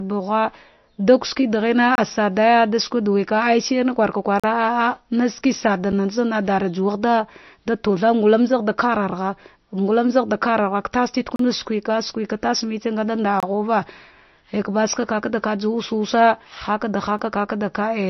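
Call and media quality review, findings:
MP3 compression, throughout. Watery, swirling codec damage, plainly audible across the speech, likely from MP3 encoding at a low bitrate, which fits around 34 kbps. The encoder drops weak frequency lines that flicker frame to frame and cuts the treble outright. Spectrogram: hard ceiling at 5.9 kHz with nothing above, and patchy, blotchy energy below it where lines switch on and off.

Block of digital silence, six events. Sound drops out and returns abruptly, with no fade:
1.95–1.98 s (26 ms)
4.40–4.44 s, just after "shirna kurka" (40 ms)
5.92 s (7 ms, heard as a tick or dip)
11.36–11.39 s (34 ms)
13.40–13.43 s, just after "ngada nda" (26 ms)
17.19 s (5 ms, tick or dip)
Probable component: the playback or processing stage. The output buffer was not filled in time, or a calculation produced invalid values. Waveform: flat line with sheer edges. Spectrogram: narrow empty vertical bands.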